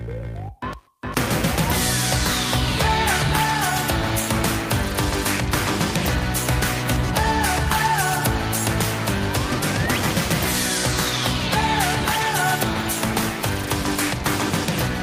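No technical faults can be heard anywhere in the clip. Nothing in the audio calls for a timestamp or a comment.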